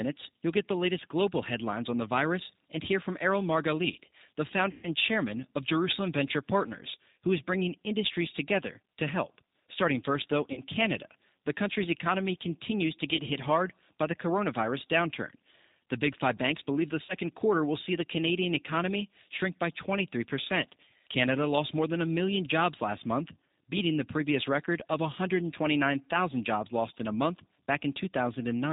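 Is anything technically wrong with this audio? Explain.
Yes. The G.729 codec runs throughout. This 8 kbit/s coder rebuilds the speech from a filter, a pitch predictor and sparse pulses, so it is band-limited below 4 kHz and plainly rough and synthetic.

VoIP packet loss concealed by the speech codec occurs at 4.71–4.86 s (120 ms lost), 10.53–10.62 s (40 ms), 13.17–13.21 s (20 ms) and 17.05–17.15 s (40 ms). The decoder extrapolates its last pitch and filter with falling gain, stretching the sound into a fading smear that stays weak briefly afterwards. The faint room noise, about 54 dB below the speech, is part of the recording.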